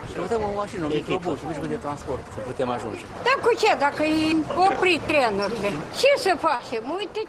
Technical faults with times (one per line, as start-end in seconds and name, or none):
6.55-6.62 short concealed packet loss